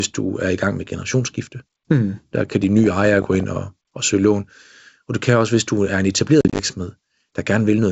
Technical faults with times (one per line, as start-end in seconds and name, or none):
6.41-6.60 packet loss on an ADPCM call